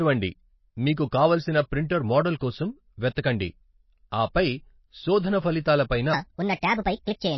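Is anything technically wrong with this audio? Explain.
Yes, three faults are audible.

MP3 compression runs through the whole recording. The audio is likely MP3-encoded at a low bitrate, which fits about 24 kbps. With so few bits available, the encoder drops weaker frequency lines, which then switch on and off between frames, and it removes everything above 5.8 kHz. The damage is plainly audible. The speech sounds watery and swirly, sibilants lose their top end and turn metallic, and consonant attacks smear.

A section at the wrong speed runs from 6.13 s to the end. This passage was likely played back against the wrong clock, running 1.42 times faster than it was recorded. Because speed and pitch move together, the pitch also rises by roughly seven semitones. The change happens abruptly, so the speech suddenly becomes high-pitched and hurried, with a chipmunk-like quality.

Pre-echo occurs from 6.81 to 6.85 s, inside the sped-up section. 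A sharp onset fell late in a codec block, and the quantisation noise, sized for that loud attack, was spread across the whole block, including the quiet stretch before it. The result is about 42 ms of hiss arriving just ahead of the attack, and the attack itself sounds softened and blurred.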